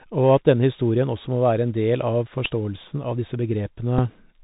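A narrow, boxed-in tone runs through the whole speech clip, with nothing above 4 kHz, a grainy hiss beneath the voice, and s sounds that come out scratchy and rough. This is the Bluetooth CVSD headset codec, and the damage is plainly audible. CVSD sends one bit per sample saying only up or down, with a step size that adapts, a scheme consistent with a 64 kbps link. Fast, bright sounds outrun that step and distort, and the constant hunting leaves the hiss.

At 2.45 s a brief buzzy rasp breaks in, lasting about 11 ms. It is a Bluetooth headset packet repeated several times in a row, which fits about three lost voice packets between headset and phone. With each one gone, the chip decoded the previous packet's bits again. Repeating every 3.75 ms puts a buzz near 267 Hz into the gap until good packets resume.

At 3.99 s there is only a small tick, the same fault on a single packet. One lost slot of about 3.8 ms was filled by replaying the last packet once, too short to build any buzz.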